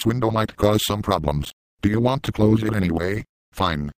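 Nothing in the audio stood out as a technical problem on listening.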